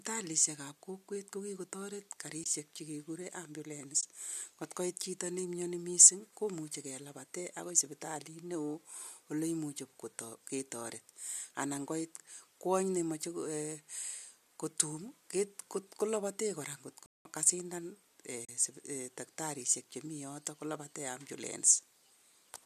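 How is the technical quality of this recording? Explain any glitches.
The speech carries two kinds of glitch: three short muted dropouts from AAC frame loss and one longer playback stall. Underneath, the low-delay AAC compression (likely AAC-ELD at around 64 kbps) leaves only a light texture.

AAC frame loss with muting shows up at 2.44–2.46 s, 4.01–4.03 s and 18.45–18.49 s. Frames went missing, about 20 ms twice and about 40 ms the third time, and the decoder zeroed them. The overlapping windows fade the sound out and back in, so you get soft little holes.

The playback stall runs from 17.06 to 17.25 s, roughly 190 ms of silence. The player likely ran short of data or got blocked. The speech just stops mid-flow, then picks up again.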